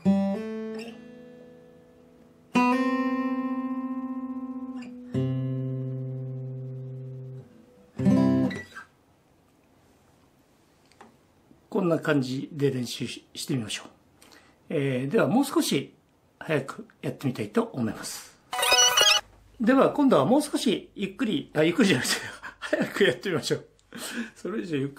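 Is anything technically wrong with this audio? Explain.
Yes, there's sample clock jitter running through the whole clip. The converter's clock wobbles by a few microseconds, so each sample lands a touch early or late, and the resulting error scales with how steeply the waveform is moving. That leaves a gritty hiss sitting roughly 30 dB below the signal, thickening on loud, bright passages and dropping away completely wherever the audio goes quiet.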